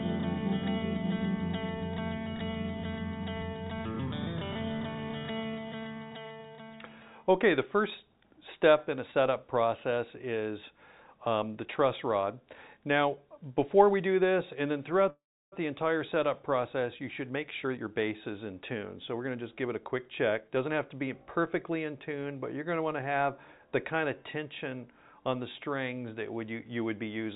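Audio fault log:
15.10–15.54 s, call audio freeze: sound stretches into a fading buzz, then about 0.32 s of silence, likely from delayed packets. The waveform shows a flat gap before resuming.
17.20–21.80 s, jitter buffer speed-up: roughly 0.4 s of pitch periods is trimmed, so the audio runs about 9% fast at unchanged pitch, with harmonics level but events compressed in time.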